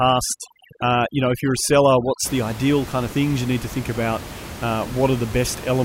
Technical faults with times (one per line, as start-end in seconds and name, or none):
0.00-2.25 overdone noise removal